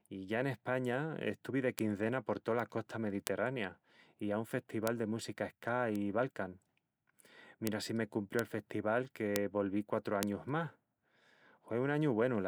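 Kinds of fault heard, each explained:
Bit error spike: a flipped bit jolts one or two samples off and back, giving eight sharp ticks from 1.79 to 10.23 s, most at about -10 dBFS. Each is a lone needle on the waveform and a thin full-height line on the spectrogram.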